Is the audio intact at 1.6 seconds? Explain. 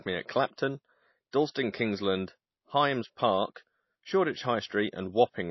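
No. At 1.6 s the speech still carries what is likely MP3 compression at a very low bitrate, in the region of 24 kbps. Nothing comes through above 5.8 kHz, and the starved encoder drops faint detail unevenly between frames, so there's a plainly audible watery, swirly smear.

Just before that, from 1.51 to 1.55 s, there's a 40 ms pre-echo. The codec spread noise meant for a sharp attack across its whole block, so a brief hiss leaks in ahead of the attack and the onset sounds softened.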